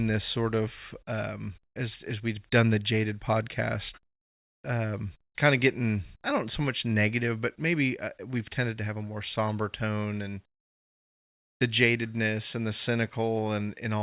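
Speech that has come through a WebRTC call path, with nothing above 4 kHz and a narrowband sound that fits a 64 kbps G.711 A-law link, and no technical faults can be heard in the signal.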